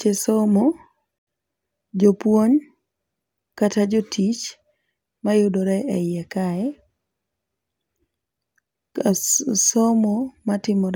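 A Bluetooth stall likely occurs at 1.18 s: wireless packets were held up on their way to the headphones, their buffer emptied, and playback had nothing to play until the delayed packets came through. In the speech this shows up as an abrupt drop to complete silence lasting 87 ms, from 1.18 to 1.27 s, after which the sound comes back in suddenly rather than fading up, leaving a brief hole in the speech.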